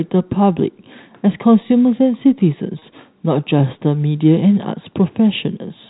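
A speech recording carried over G.711 telephone coding, with its narrowband tone, has a brief held, buzzy stretch from 2.79 to 2.82 s. This is packet loss with pitch repetition: about 30 ms of audio went missing, which points to one lost packet, and the receiver filled the gap by repeating the last pitch cycle.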